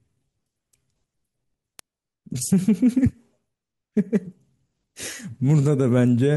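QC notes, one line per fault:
0.33 to 6.19 s, word clock ticks: roughly ten sharp ticks about every 0.7 s, one sample slipped each time by an unlocked receiver clock around 30 ppm off.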